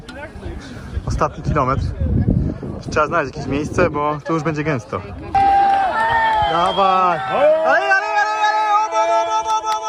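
A short concealed packet loss occurs at 6.05 to 6.10 s. About 20 ms of the stream arrived too late for the decoder, and the receiver bridged the gap with roughly 25 ms of synthesized continuation before blending back, leaving a brief smear or wobble.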